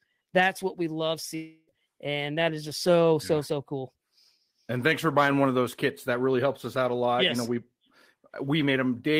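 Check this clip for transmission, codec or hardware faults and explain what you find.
There is one fault. From 1.35 to 1.69 s, after "that's what we love", the sound smears into a fading buzz before "and that is just" resumes, likely a long network dropout, with about 0.32 s lost and concealed.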